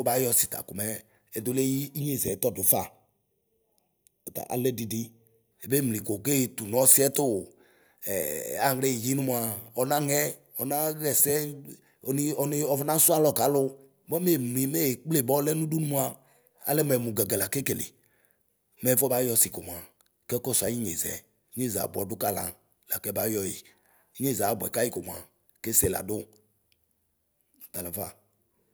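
From 2.00 to 5.52 s the speech turns hollow and phasey: channel delay (comb filtering), with one channel lagging by roughly a third of a millisecond before mono summing. A spectrogram shows fixed dark notch bands, the first near 1.5 kHz, repeating evenly upward.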